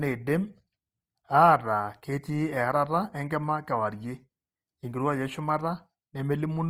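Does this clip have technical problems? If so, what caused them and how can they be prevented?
Yes. Opus compression runs through the whole speech clip. The speech sounds rough and grainy, with noise filling the upper bands. This likely comes from Opus music mode at a low bitrate, around 24 kbps. Encoding at a higher bitrate would prevent it.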